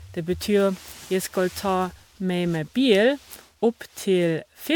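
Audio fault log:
Throughout, generation loss: the speech was likely decoded and re-encoded as MP3 about seven times, at a rate fitting 128 kbit/s. Each pass requantises on a shifted frame grid, so noise and spectral holes accumulate into a swirly, hollow, smeared sound with blurred attacks.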